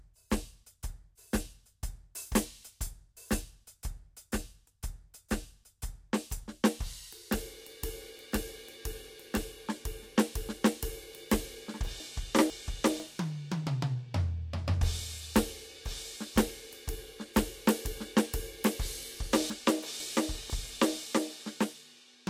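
At 12.0 to 13.0 s and again at 19.5 to 20.5 s the music stumbles with chunks out of order: within each one-second span, two half-second pieces play swapped, the later one first. Each has three hard joins, and the passage sounds jumbled rather than gapped. Unlike a dropout, nothing goes missing, and unlike a stutter, nothing repeats. The full material is all there, just in the wrong order.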